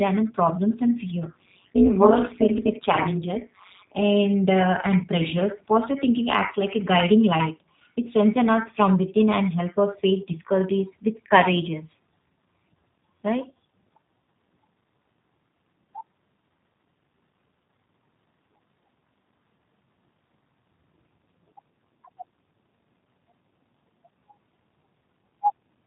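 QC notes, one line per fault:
throughout, G.729 codec: the speech is squeezed into a band that stops at 4 kHz and comes back rough and slightly synthetic, with plainly audible damage that fits an 8 kbit/s coder rebuilding each 10 ms frame from a filter and a few pulses. Unlike plain low-bitrate MP3 smearing, it has no swirly treble and sounds buzzy rather than watery.
1.23 to 4.03 s, overlap-add ripple: the level pumps up and down at around 200 Hz, with swings of about 60 dB. The reassembled frames overlap with uneven gain, so every frame dips. This periodic metallic buzz sets it apart from the codec's irregular roughness.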